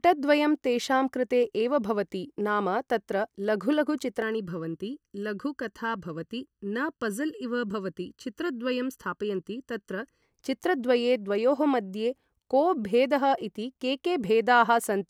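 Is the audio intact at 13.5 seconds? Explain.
Yes, at 13.5 seconds the speech plays through cleanly, with no dropout, click, distortion or other fault to be heard at that point.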